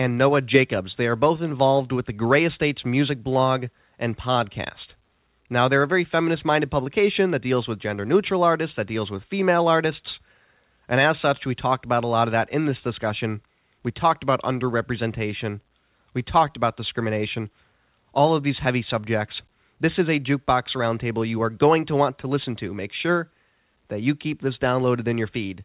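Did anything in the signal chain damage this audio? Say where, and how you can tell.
No, nothing in the chain damaged this speech: it carries the ordinary narrowband character of a call, with nothing above 4 kHz, which fits a G.711-style telephone codec, and the microphone processing and call path show only their normal behaviour.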